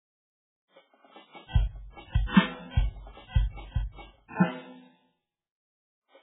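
Throughout this music clip the sound is dull and watery, with swirling, metallic textures and smeared attacks, and nothing above about 3.8 kHz. That points to heavy MP3 compression, likely at a very low bitrate near 8 kbps, cutting treble and switching weak frequency lines on and off.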